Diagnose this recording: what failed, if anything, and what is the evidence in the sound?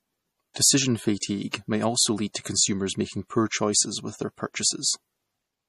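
The codec stage failed. Nothing sounds above 14.1 kHz, and the speech has a watery, swirling quality throughout, likely from MP3 compression at a low bitrate near 40 kbps. Unlike a plain low-pass filter, weak frequency lines flicker between frames rather than the audio simply dulling.

Pre-echo, also from the codec, puts brief hiss ahead of attacks at 0.54 s, at 1.51 s just before "may also", at 2.33 s after "may also", and at 2.43 s before "consumers making". Each spans 21 to 27 ms: block-spread quantisation noise arriving early, unlike a click or dropout.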